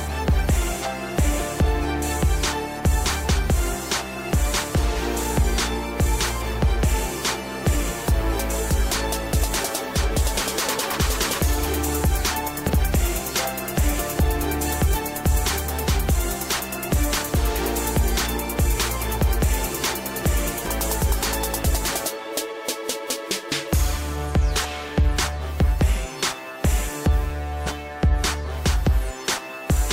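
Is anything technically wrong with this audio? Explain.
Yes. At 0.81–0.86, 3.23–3.27, 12.66–12.70, 14.93–14.96, 20.64–20.68 and 27.66–27.70 s, compressed frames were skipped: whole frames were not played, so the audio jumps ahead by roughly 0.15 to 0.5 s. The jump sizes fit a frame of about 46 ms.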